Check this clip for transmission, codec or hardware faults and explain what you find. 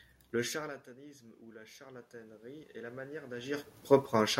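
The clip has one fault: automatic gain rising. The talker's movements around 0.5 s and 3.5 s are natural level changes, not faults.

From 0.41 to 3.74 s, after the input dropped about 20 dB, the automatic gain control climbs about 12 dB. Voice and room noise swell together, seen as a steadily widening waveform and a rising spectrogram noise floor.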